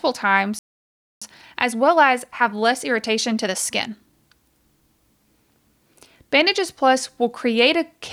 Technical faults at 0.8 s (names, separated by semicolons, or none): playback stall